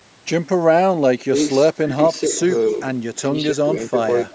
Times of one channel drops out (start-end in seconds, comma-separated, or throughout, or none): none